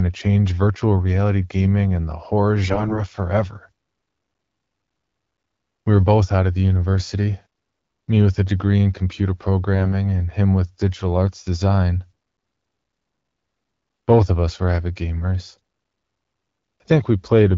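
Speech carried over AMR-WB at 12.65 kbit/s turns briefly hoarse and gargly from AMR bit errors at 2.64–2.99 s after "gaming and the horror", 9.76–9.92 s between "a degree in computer" and "and him with digital", and at 15.56 s after "us were avid gamers". Unlike packet loss, which mutes or repeats sound, pitch and level persist while corrupted excitation pulses scratch.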